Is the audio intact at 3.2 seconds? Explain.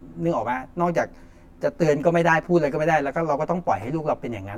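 No. At 3.2 seconds the speech carries channel delay (comb filtering), present across the whole clip. One channel arrives roughly 10 ms late, and when the two are summed to mono, shared content cancels at evenly spaced frequencies starting near 40 Hz. The result is a hollow, phasey tone. The notches stay fixed rather than sweeping, which rules out flanging, and the gap is too short to be heard as a separate echo.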